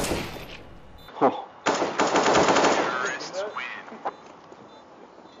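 At 1.08 s the sound abruptly turns duller and boxier and stays that way to the end, with nothing above about 7.1 kHz, no gap at the change, and the level essentially unchanged. The likely cause is an input switched to a poorer device. What separates it from a simple filter or codec bandwidth drop is that the band limit arrives together with a different tonal colour and a new, faint background noise floor.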